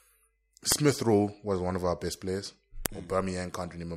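Speech with a file header played as audio: sharp, loud snaps at 0.72 s and 2.86 s, after "of our best players", where leftover WAV header bytes from joined pieces play as samples. Unlike clipping, each snap ignores the signal's level.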